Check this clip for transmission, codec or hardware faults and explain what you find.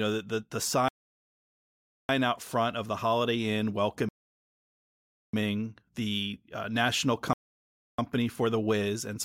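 The speech stops dead three times from rebuffering stalls. The first runs from 0.88 to 2.09 s, after "know the the the" and before "out front of the". The second runs from 4.09 to 5.34 s. The third runs from 7.33 to 7.99 s, after "the uh national". Each time, the player exhausted its downloaded audio and waited for more. The sound drops to silence, then picks up exactly where it stopped. Nothing is lost. About 1.2, 1.2 and 0.65 s of silence are added.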